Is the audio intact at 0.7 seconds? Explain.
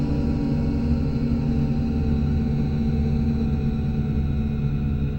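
Yes, at 0.7 seconds the audio plays through cleanly, with no dropout, click, distortion or other fault to be heard at that point.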